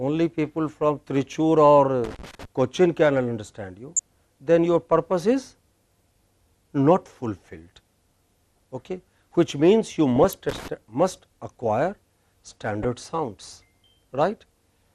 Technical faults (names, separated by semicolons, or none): MP2 compression; loose connector crackle; DAB burbling